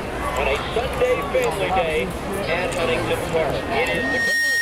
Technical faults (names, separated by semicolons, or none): loudspeaker feedback squeal